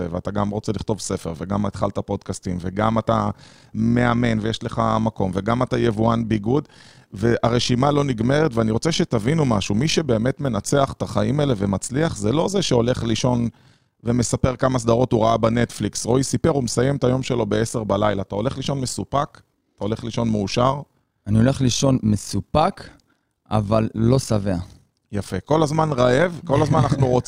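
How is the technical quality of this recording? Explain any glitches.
The recording has one fault, overlap-add ripple, throughout. Windowed frames overlap unevenly, so level dips about 6 dB around fifty times a second. Speech gains a rough, robotic flutter.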